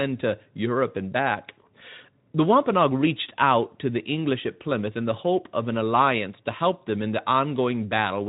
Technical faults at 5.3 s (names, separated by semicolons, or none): none